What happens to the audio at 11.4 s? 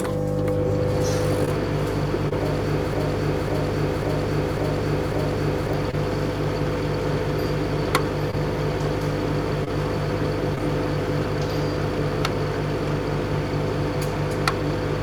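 At 11.4 s the sound carries on intact, with no dropout, click, distortion or other fault at that moment.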